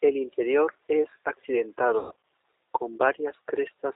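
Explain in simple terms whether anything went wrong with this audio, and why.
G.729 codec, throughout: the speech was squeezed through a low-quality phone codec that rebuilds the voice from a simple model, so it sounds thin, slightly rough and synthetic, with nothing above 4 kHz.

VoIP packet loss concealed by the speech codec, from 1.99 to 2.22 s: chunks of the call went missing, about 180 ms in all with the longest gap 120 ms. The decoder filled them by stretching the last sound into a fading buzz or noise, and the voice stays weak or distorted for a moment after.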